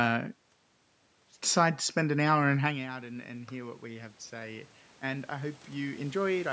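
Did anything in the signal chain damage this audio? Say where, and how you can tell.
Yes. After "spend an hour and", voice and room noise swell together by about 9 dB from 2.62 to 6.48 s. This is automatic gain rising in call processing as it compensates for the talker moving back around 2.5 s.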